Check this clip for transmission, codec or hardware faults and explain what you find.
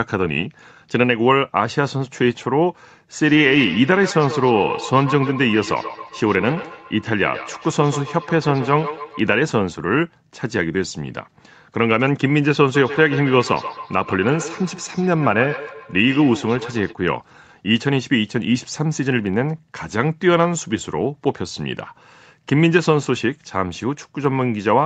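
There's a feedback echo between two devices, showing up twice: from 3.22 to 9.38 s and again from 12.75 to 16.97 s. A second device in the room is playing the call back into a microphone, and the echo canceller only strips out its own device's playback, so the speech loops round. You hear each word come back roughly every 150 ms, getting thinner and more metallic each time, peaking at about -11 dB and about -12 dB below the speech. All of it sits under the 8 kHz ceiling of the Opus call path.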